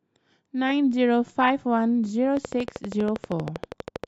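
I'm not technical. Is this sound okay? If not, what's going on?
No. From 2.37 to 4.05 s there's a train of clicks: about 20 evenly spaced ticks, 12.6 per second, likely from electrical interference.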